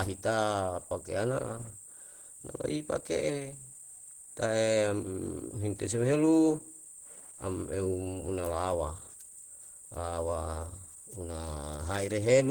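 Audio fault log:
throughout, Opus compression: the speech has likely been squeezed through Opus at a low rate, one that points to about 16 kbps, with the encoder in its hybrid mode, coding the lower band as speech and the upper band by band energy. So few bits spread across the full band leave the speech plainly damaged, hoarse and somewhat muffled, with a rough, grainy texture in the highs, even though content still reaches 20.1 kHz.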